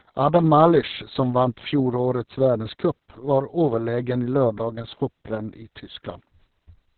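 It's a speech clip, and the whole thing carries heavy Opus voice compression: the band stops around 4 kHz, so it sounds muffled, and the coarse SILK excitation makes it hoarse and a bit robotic. That damage points to a very low bitrate, around 6 kbps.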